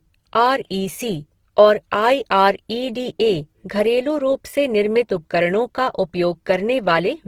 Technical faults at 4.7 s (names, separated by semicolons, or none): Opus compression